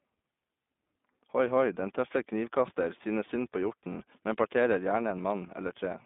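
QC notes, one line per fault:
Throughout: iLBC codec. Sound is boxed into roughly 200 Hz to 3.6 kHz, with a rough, synthetic edge from independently coded 20 ms frames, fitting the 15.2 kbps mode.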